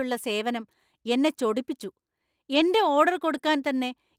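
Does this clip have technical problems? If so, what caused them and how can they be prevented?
Yes. A lost packet rebuilt from error correction appears at 2.55 to 2.57 s and 3.37 to 3.39 s. Each time the decoder played a low-bitrate copy of a 20 ms packet, so those frames sound rougher and noisier. On a spectrogram they show as brief blurred slices. Prevention: reduce packet loss with a steadier network path or more jitter-buffer headroom.

A short concealed packet loss follows at 3.41 to 3.45 s. 20 ms never arrived, and about 16 ms was filled by extending the previous sound, giving a brief smear. The waveform shows a stretch continued from the sound before it, without real detail. Prevention: fix the loss at its source, because concealment can only guess at missing audio.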